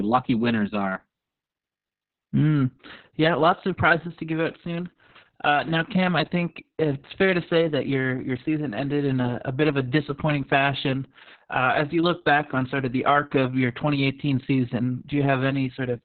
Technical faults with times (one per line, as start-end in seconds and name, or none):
0.00-16.04 Opus voice compression